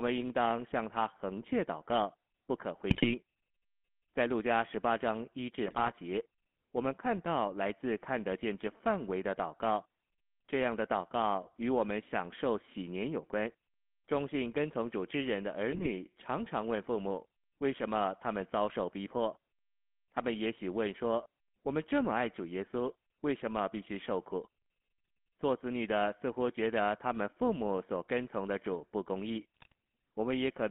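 From the first second the whole clip sits behind the GSM full-rate codec, and it's plainly audible. The sound is squeezed into a telephone band of roughly 200 Hz to 3.5 kHz. The codec rebuilds the vocal tract from a filter driven by a coarse, regularly spaced pulse train, so the speech takes on that buzzy, gravelly grain. That character fits a 13 kbps full-rate stream.

On top of that there are four bursts of GSM bit errors, at 2.90 to 3.09 s, 5.66 to 5.93 s, 15.72 to 15.87 s and 29.55 to 29.72 s. In each one corrupted bits reach the decoder and garble the filter, pitch or gain values for 7 to 13 frames. The speech suddenly turns into squawks, pops and gargling for a fraction of a second, then snaps back.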